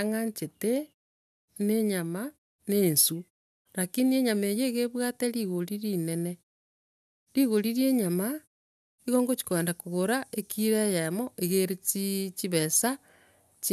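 A speech recording with no technical faults. In the pauses the output fades to silence and the background drops away, then returns in time for the next sound, so only very quiet sound is lost.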